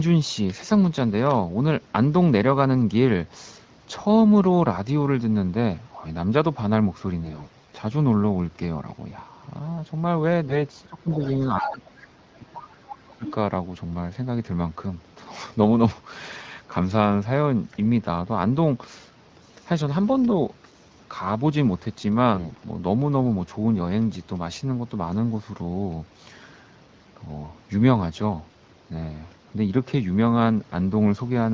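From 7.24 to 7.76 s and again from 10.48 to 10.62 s there are AMR bit errors: flipped bits in the weakly protected parts of the frames. The speech keeps its pitch and level but goes hoarse and gargly, worse in the short second burst.

Between 10.86 and 13.25 s, speech is suppressed in double talk in three dips: 10.86–11.23, 11.39–12.17 and 12.36–13.25 s. They sink by about 15, 20 and 30 dB. The likely cause is an echo canceller ducking both talkers.

The other side's voice leaks through at 11.11–11.36, 11.6–11.78 and 13.11–13.32 s, about 20, 5 and 10 dB under the speech. That's likely echo the canceller didn't fully remove.

The AMR bit errors come back from 22.34 to 22.60 s, with the same scratchy, gargly roughness.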